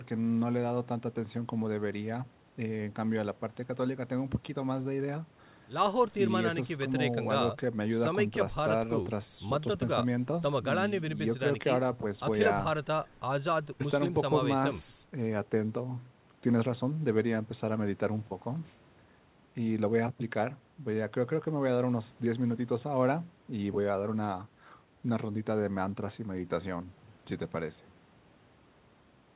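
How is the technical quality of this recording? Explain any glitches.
No glitches can be heard in this speech recording; it carries the narrowband sound of a telephone-style call path, with nothing above 4 kHz, which fits a G.711 mu-law link at 64 kbps.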